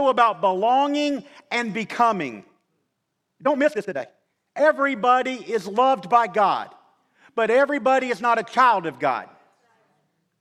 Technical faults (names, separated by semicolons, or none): time-stretched section